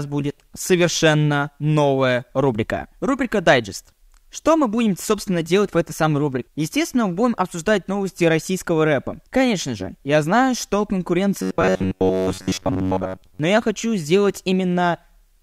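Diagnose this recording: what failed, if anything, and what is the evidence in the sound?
At the driver or buffer stage, new audio was likely arriving too seldom, so the software kept replaying its last short block instead of waiting. From 11.42 to 13.40 s the speech turns into robotic sound from repeated short buffers: a rigid, metallic buzz pinned at about 93.8 Hz, which points to a block of roughly 10.7 ms being looped. Around 70 percent of that stretch is repetition, so much of the real speech is skipped while the buzz still loosely tracks the syllables.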